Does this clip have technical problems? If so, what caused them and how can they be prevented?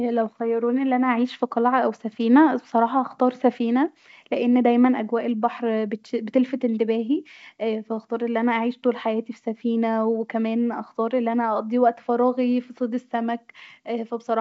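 No, the speech comes through as ordinary G.722 wideband telephone audio at 64 kbit/s, reaching up to about 7 kHz with at most a faint trace of the coding in the upper band, and there is nothing here that needs correcting or preventing.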